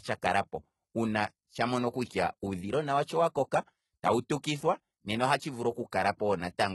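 Right through the speech the treble sounds rebuilt rather than recorded, likely from heavy HE-AAC compression at a very low bitrate around 16 kbps, so s sounds come out gritty and lispy, with nothing above 11.8 kHz.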